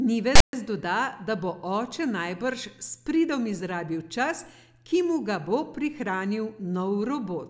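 From 0.35 to 0.53 s, file tags played as audio: text metadata decoded as samples gives a hard-edged rasp, then flat silence from zero padding, just before "doda da bo oče". The waveform shows a block offset to one side, and the spectrogram a broadband smear.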